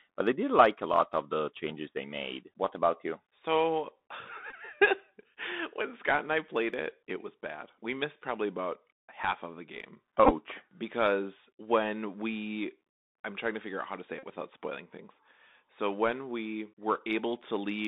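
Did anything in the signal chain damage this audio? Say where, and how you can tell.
Yes. Throughout the clip the speech sounds boxed-in and narrow, with nothing below about 200 Hz or above about 3.7 kHz. The s sounds are scratchy, a granular hiss sits under everything, and loud bright moments break up. This is the Bluetooth CVSD headset codec at the codec stage. It sends one bit per sample saying only up or down, at a rate that fits a 64 kbit/s stream. When its adaptive step can't keep pace with fast, loud high-frequency movement, it distorts, and its constant stepping leaves the grainy noise floor.

Three short buzzy blips come from Bluetooth headset packet repeats on the radio link between headset and phone. The first, at 4.50–4.54 s, covers about 18.8 ms of lost audio, which fits five packets. The second, at 10.24–10.31 s, is 37.5 ms lost, scattered over 67.5 ms, with the longest unbroken run around 15 ms. 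The third, at 14.19–14.23 s, loses 41.2 ms. In each, the chip replays the last good packet every 3.75 ms, producing a steady buzz near 267 Hz.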